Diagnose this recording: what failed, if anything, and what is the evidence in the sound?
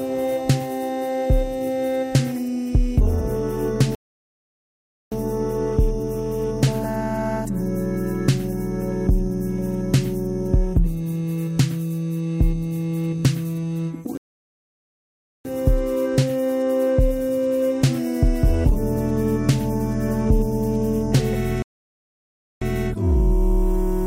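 Playback stall at 3.95, 14.17 and 21.62 s. Sound drops to silence for 1.17, 1.27 and 0.99 s, likely from data starvation or a blocked player thread.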